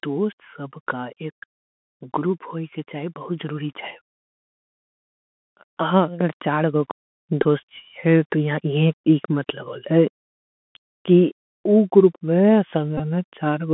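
The whole clip carries the Bluetooth CVSD headset codec. The sound sits in a narrow 200 Hz to 3.4 kHz band, which points to the 64 kbps one-bit-per-sample scheme. Its adaptive step can't keep up with sharp high content, so s sounds come out scratchy over a grainy hiss, and the damage is plainly audible.

From 1.89 to 3.86 s, automatic gain rising lifts the level by about 4 dB. From 5.78 to 7.74 s it does it again by about 6 dB. Each time the gain control judged the input too quiet and brought the speech and the background up together, so you hear a gradual swell over about two seconds.

Near the end of that second swell, from 7.43 to 7.45 s, there's a Bluetooth headset packet repeated fault. Lost packets were covered by decoding the previous packet's bits again. The roughly 19 ms gap fits a short run of 3.75 ms packets, which gives a brief buzzy flutter near 267 Hz. The same thing happens again from 12.98 to 13.00 s.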